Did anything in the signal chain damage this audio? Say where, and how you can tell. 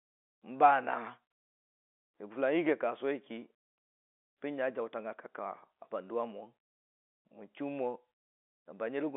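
No, nothing in the signal chain damaged this audio.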